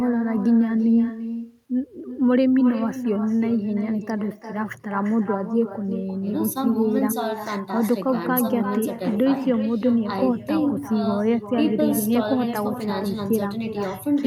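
Throughout, the far end's microphone is picking up the call from its loudspeaker and sending it back with nothing removing it: echo with no canceller. Every phrase of speech returns roughly 300 ms later as a copy about 11 dB quieter and thinner.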